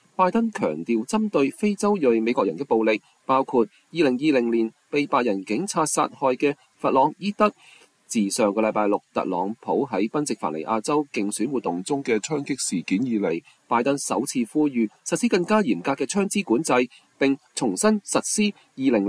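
From 11.67 to 13.31 s there's a wrong sample rate stretch. The audio suddenly runs slow and sits low, about one and a half semitones flat, at roughly 0.92 times normal speed. That ratio fits 24 kHz material being clocked out at 22 kHz with no resampling, so timing and pitch drop together by the same factor. It has that slightly sluggish, dragged-down feel, then snaps back to normal when the segment ends.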